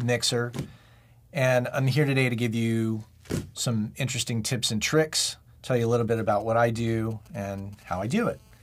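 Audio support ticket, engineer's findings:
GSM signalling bursts, 5.8 to 7.8 s: 2G handset nearby sending short signalling radio bursts, rectified in the audio input stage. Galloping dit-dit-dit ticks with brief 217 Hz buzzes, roughly 30 dB under the wanted audio.

GSM phone buzz, 7.88 to 8.58 s: 2G handset nearby in a call, transmitting in bursts 217 times a second, its 217 Hz burst envelope rectified by the audio circuit. Hard, raspy 217 Hz buzz rich in harmonics, about 35 dB below signal, unrelated to the programme.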